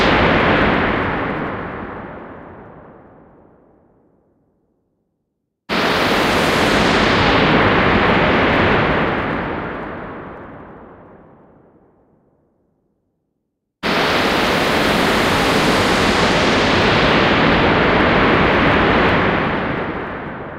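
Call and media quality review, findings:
Soft continuous rattle of faint regular ticks, roughly 50 per second, from 0.12 s to 20.57 s, clearest on louder sustained sound. Clock slip clicks: probable cause is a free-running clock mismatch between two devices, likely off by around 0.1%. One sample is dropped or repeated each time the drift reaches a whole sample, about every 20 ms.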